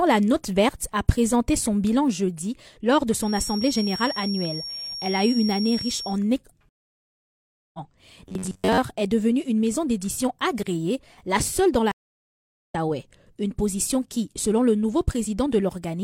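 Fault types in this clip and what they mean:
feedback whistle: The loudspeaker-to-microphone loop was likely held right at the edge of feedback, so a single 5.5 kHz tone rings without building up. From 3.17 to 6.20 s it sits as a thin whistle that swells and fades slowly, about 10 dB under the sound.
stream reconnect: The connection dropped and the player rejoined with a fresh decoder partway through the stream, skipping what it missed. Silence runs 6.69 to 7.79 s, then the audio picks up roughly a second further on; a second gap from 11.92 to 12.75 s lands about 0.7 s later.
robotic sound from repeated short buffers: Fresh audio arrived too rarely, and the playback side likely covered the shortfall by looping its last short buffer, which fits a block of about 10.7 ms. From 8.29 to 8.79 s most of the sound becomes a rigid, metallic 93.8 Hz buzz.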